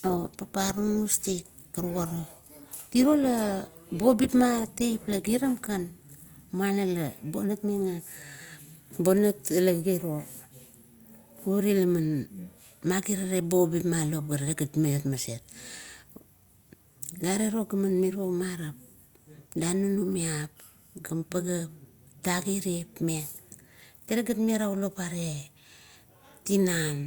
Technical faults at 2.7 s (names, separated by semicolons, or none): adaptive stream starting at a low bitrate